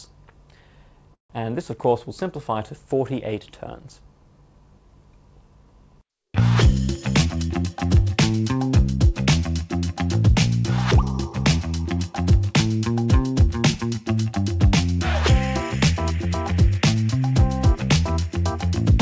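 The audio has come through a call path, and the top end stops at 8 kHz, which points to a wideband codec like G.722 at around 64 kbps. At 1.14 to 1.32 s there's a call audio freeze. The sound stalls and the last bit gets stretched into a brief fading buzz or hiss that drops to silence for about 120 ms. Then it picks up exactly where it left off. Nothing is lost, but roughly 156 ms of gap gets inserted, most likely because delayed packets let the jitter buffer run dry. Later there are two jitter buffer speed-ups, where the buffer was trimming backlog by cutting out tiny pitch-period slices. From 7.25 to 7.66 s the audio runs about 15% fast with roughly 70 ms removed, so it sounds noticeably hurried while the pitch holds steady. From 15.91 to 17.03 s it's a gentler 8% push over a longer stretch, dropping about 100 ms in total.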